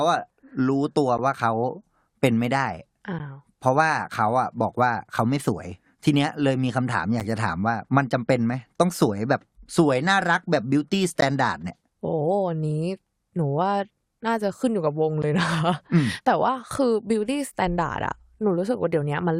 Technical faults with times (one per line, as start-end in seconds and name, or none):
3.19 gap between stream segments
7.20 gap between stream segments
11.21 gap between stream segments
15.22 gap between stream segments